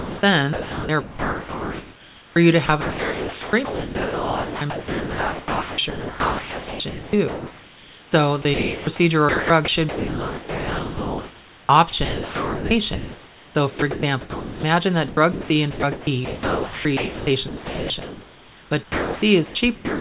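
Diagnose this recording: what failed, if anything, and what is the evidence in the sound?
Comfort noise in place of the background, 0.00 to 0.23 s: a steady, featureless hiss about 1 dB off the room noise, likely from sender-side discontinuous transmission.

Sound chopped by the voice detector at 0.53–2.36, 2.66–8.12, 8.42–8.87, 9.29–14.63 and 15.08–20.0 s: speech edges drop into synthetic noise, likely from the sender's detector toggling transmission.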